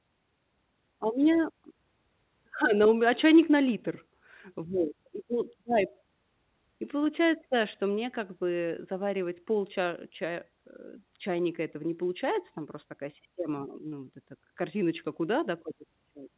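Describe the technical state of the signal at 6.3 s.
At 6.3 s the speech comes through intact, with no fault at that moment, only the normal narrowband character of the call path, whose band stops at 4 kHz.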